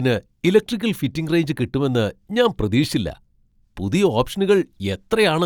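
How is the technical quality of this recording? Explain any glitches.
The recording carries no audible technical faults, and the signal stays continuous and intact for its whole duration.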